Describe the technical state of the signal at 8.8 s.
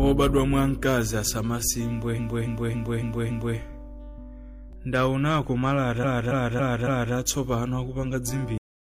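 At 8.8 s there is nothing to hear: the sound stops abruptly at 8.58 s, mid-event, and the signal stays at flat digital silence through to the end, 8.93 s. There is no fade or natural decay, just a sharp edge. This is a cut-off end. The final stretch of audio buffers was never written out or played back, so the recording ends partway through a sound and the missing portion is replaced by silence.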